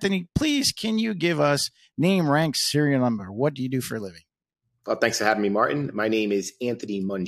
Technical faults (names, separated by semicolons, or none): none